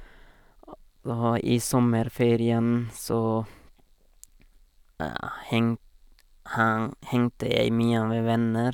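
No technical faults can be heard anywhere in this speech.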